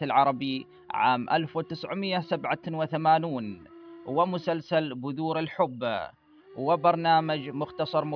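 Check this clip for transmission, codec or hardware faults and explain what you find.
Nothing stood out on listening to the clip that would suggest a problem with how it was transmitted, encoded or recorded.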